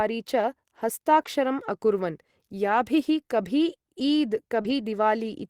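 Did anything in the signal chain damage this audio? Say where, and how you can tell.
Yes. Lost packet rebuilt from error correction at 1.21–1.27 s and 4.64–4.71 s: a network loss, filled without a gap by the next packets' low-bitrate copies, so the speech there sounds rougher and noisier.

Short concealed packet loss at 4.61–4.74 s, just after "कभी ईद्": about 40 ms arrived too late, and the receiver extended the preceding speech to cover it, leaving a brief smear and adding a little time.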